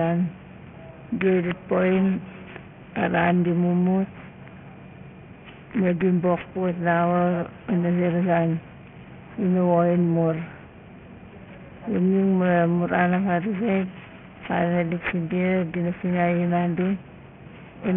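A speech clip with aliasing throughout: it was downsampled without an anti-aliasing filter, consistent with a new rate of 6 kHz, so content above the 3 kHz fold point mirrors back as false tones roughly 20 dB below the speech, leaving sibilants gritty and metallic right up to the band edge.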